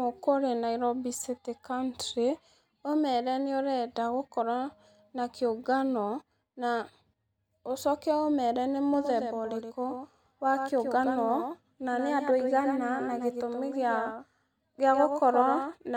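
Speech carries a doubled audio track from 8.94 s to the end: a flat, full-band second copy trails about a tenth of a second behind, roughly 5 dB quieter, likely from a slower duplicate capture path.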